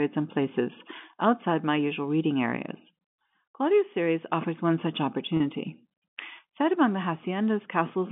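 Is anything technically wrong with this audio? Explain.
Yes. At 5.37 to 5.40 s there is packet loss with pitch repetition. About 30 ms of speech went missing, which fits a single lost packet. The receiver repeated the last pitch period to fill it, so the speech briefly holds with a slight buzz. The telephone-band G.711 coding narrows the sound to roughly 150 Hz to 3.5 kHz.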